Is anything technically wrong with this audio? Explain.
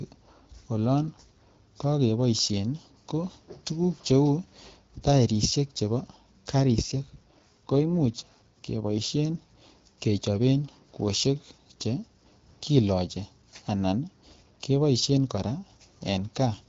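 Yes. From 6.56 to 9.58 s an AMR rate drop makes the speech rougher and more synthetic, which fits the AMR wideband codec stepping down from 12.65 to about 8.85 kbit/s. A spectrogram shows no gap and no bandwidth change, only grainier, smeared harmonics.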